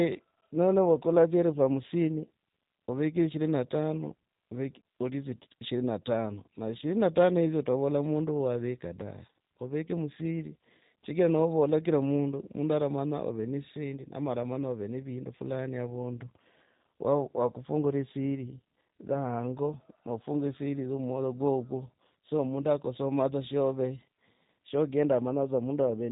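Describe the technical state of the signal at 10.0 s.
At 10.0 s, as throughout, the speech carries G.729 codec damage: nothing above 3.8 kHz, and rough, synthetic pulse-based reconstruction pointing to an 8 kbit/s coder.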